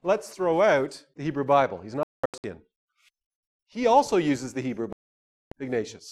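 The speech cuts out twice. From 2.03 to 2.44 s it breaks into scattered silent gaps, 345 ms lost in total, the longest 203 ms. From 4.93 to 5.52 s it goes silent for 589 ms. Each time it resumes further on. This is likely a Bluetooth dropout, with late packets discarded.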